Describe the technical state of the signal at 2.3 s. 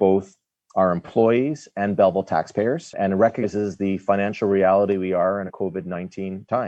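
At 2.3 s the signal is intact, with no dropout, clipping, distortion or other fault.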